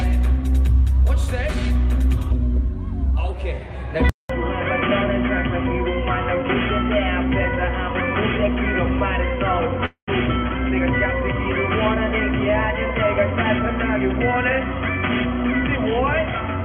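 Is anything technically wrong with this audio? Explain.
Yes, there are two faults.

At 4.09 s the sound cuts out for about 200 ms and comes back dull and boxy, with nothing above 3.3 kHz, somewhat quieter, and with a faint new background noise well beneath it. It stays that way to the end. This points to an input switched to a poorer device, likely a change to a different microphone or a headset's call profile mid-recording. The narrower band, changed level and new noise floor all come from that device.

From 9.85 s to 10.10 s there is a call audio freeze. The last sound is stretched into a fading buzz, and for roughly the final 110 ms the sound drops to silence. Then the audio resumes exactly where it left off, with nothing lost, but everything after runs about 221 ms late. This is likely a jitter buffer running dry when packets were delayed in transit, so the receiver padded the wait instead of dropping audio.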